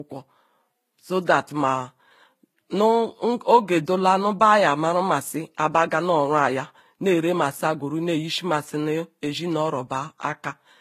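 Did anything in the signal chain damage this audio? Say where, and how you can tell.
Yes: transcoding between lossy codecs, throughout the speech, at the codec stage. Nothing survives above 14.9 kHz, and two distinct sets of coding artefacts overlap. That fits a low-rate HE-AAC encode, likely re-encoded to Vorbis, with the second codec wasting bits on the first one's damage.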